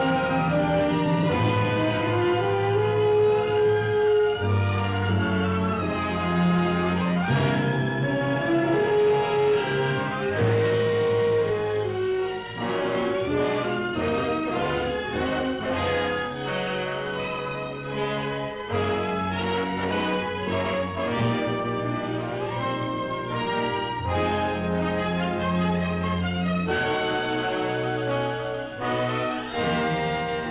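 Nothing is technically wrong with this clip; no faults can be heard anywhere in it.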